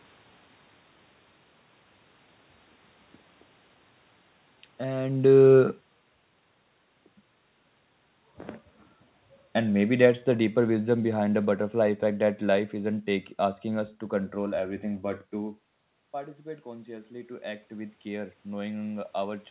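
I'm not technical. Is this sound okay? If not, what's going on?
No. From 4.88 to 6.3 s, and again from 9.57 to 12.73 s just before "isn't take asking us", the voice and background sink together. This is automatic gain falling: the system judged the input too loud and turned it down.

After "to control everything but", from 15.37 s to the end, voice and room noise slowly swell together. This is automatic gain rising: the talker moved away, the input dropped, and the system turned the volume back up gradually.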